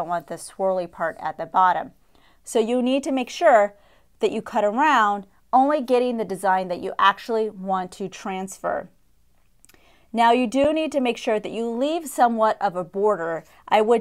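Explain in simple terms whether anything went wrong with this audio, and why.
An underrun with held sample occurs at 10.64 s. The playback buffer briefly ran dry, so the output froze at its last level for about 6 ms, a gap of 256 samples. The sound simply pauses, then resumes where it stopped, so almost nothing is lost.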